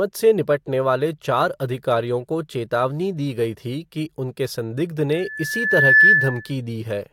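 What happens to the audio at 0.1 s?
Nothing goes wrong at 0.1 s; the speech plays through intact at that moment, with no dropout, click or distortion to be heard.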